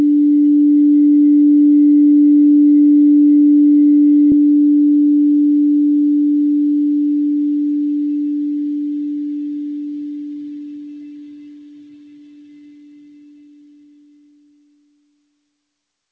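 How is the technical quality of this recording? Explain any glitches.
The recording has one glitch, a skip ahead between 4.32 and 4.46 s. The audio comes through a G.722 call path, so nothing is heard above 8 kHz.

At 4.32 s playback jumps forward: around 0.7 s of sound is missing, and the material on either side is spliced together with only a brief 20 ms join and no silent gap. The jump points to a jitter buffer that had built up too much delay and discarded queued audio to catch up, cutting latency by roughly the same 0.7 s. It sounds like an abrupt discontinuity rather than a dropout.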